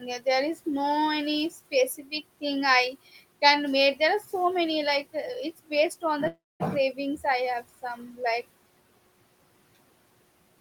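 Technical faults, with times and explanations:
1.97–2.13 s, 2.92–3.20 s and 7.82–8.20 s, speech cut by the noise suppressor: right after "is no any", just before "can make there", and later, parts of the speech dip by about 13, 10 and 9 dB. The suppressor mistook these quieter speech parts for background noise and turned them down, so they sound swallowed, even though the room noise sits about 21 dB below the speech.
6.27–6.62 s, call audio freeze: after "on the", the audio stops for 325 ms. A brief fading continuation gives way to about 220 ms of silence, then speech resumes exactly where it left off, with nothing lost but 325 ms of extra delay. The likely cause is packets held up in transit, which left the jitter buffer empty.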